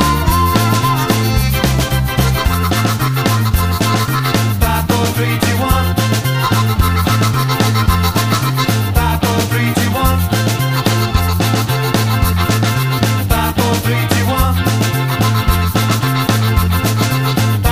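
No technical faults can be heard anywhere here.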